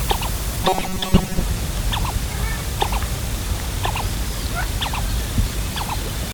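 From 0.63 to 1.42 s the sound becomes a rigid metallic buzz at 188 Hz, a robotic sound from repeated short buffers, likely because a 5.3 ms slice kept looping over most of that stretch. A spectrogram shows fixed harmonic lines at 188 Hz. The waveform shows identical repeating cycles.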